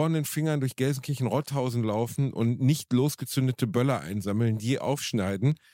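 A digital receiver running on its own clock, drifting about 20 ppm from the sender, causes word clock ticks: about seven sharp, uneven ticks roughly once a second from 0.35 to 5.52 s.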